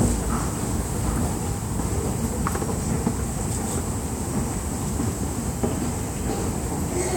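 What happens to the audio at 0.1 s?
Nothing goes wrong at 0.1 s; the audio is intact at that moment.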